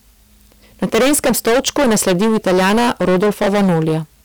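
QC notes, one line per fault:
Throughout: hard clipping. The speech is driven about 19 dB past what the stage can pass. Roughly a third of all samples hit the ceiling and are cut flat. Those squared tops add high harmonics, so every loud sound carries a harsh fuzz.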